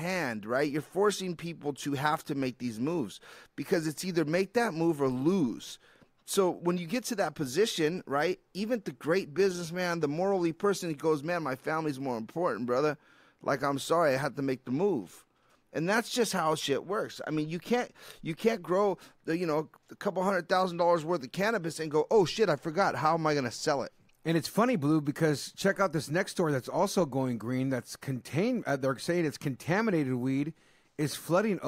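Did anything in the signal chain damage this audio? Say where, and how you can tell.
No, nothing stood out on listening that would point to damage at any stage of the signal chain.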